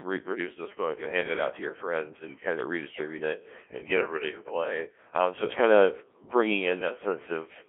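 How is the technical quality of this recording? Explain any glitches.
Technical quality is poor: the speech has been through a Codec 2 vocoder throughout, and the damage is heavy. The decoder rebuilds speech from pitch, voicing and spectral-envelope parameters using sine waves, so it sounds robotic and buzzy, band-limited to roughly 250 Hz to 3.4 kHz, consistent with a 1.3 kbit/s mode.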